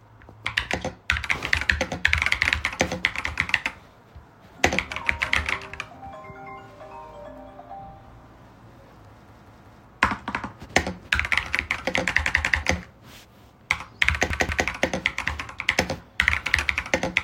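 At 9.29–9.85 s, 12.26–12.63 s and 14.30–14.68 s, a repeated buffer occurs: new audio arrived late, so the same 186 ms slice of sound plays three, then two, then two extra times with hard joins. This fits an 8192-sample buffer. Unlike a dropout, nothing goes silent. Identical chunks stutter back.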